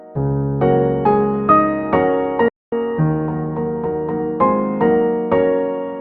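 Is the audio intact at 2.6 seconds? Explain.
No. A playback stall runs from 2.48 to 2.72 s, so the output drops to silence for about 240 ms in mid-flow before the sound picks up again. The player likely ran out of buffered data or had its thread briefly blocked.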